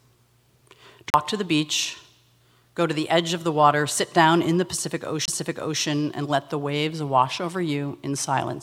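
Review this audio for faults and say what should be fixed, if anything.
The disc player suffered two CD skips: the laser lost its track and jumped to another turn of the spiral, so playback briefly muted and resumed from a different place on the disc. At 1.10 to 1.14 s, a silence of roughly 40 ms comes just before "to the beach". At 5.25 to 5.28 s, a shorter gap of about 20 ms falls between "sit down in the" and "and let the waves", and the audio picks up at a different point. Both need re-ripping. To prevent this, rip from a clean, undamaged disc on a steady, isolated drive using a secure ripping mode that re-reads and verifies each sector.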